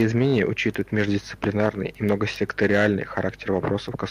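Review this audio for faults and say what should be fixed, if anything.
Nothing in this speech recording needs fixing. No technical fault can be heard anywhere in it.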